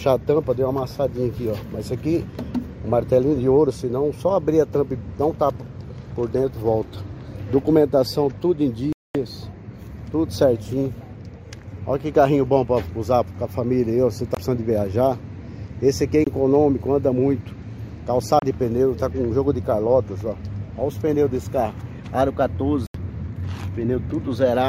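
Packets held up over the wireless link let the playback buffer run dry, so the sound cuts to silence until delivery resumes, a pattern that points to a likely Bluetooth stall. The longest gap runs from 8.93 to 9.15 s, about 223 ms. Shorter dropouts follow at 14.35 to 14.37 s, 16.24 to 16.27 s and 18.39 to 18.42 s, each 22 to 31 ms, and a 78 ms gap comes at 22.87 to 22.95 s.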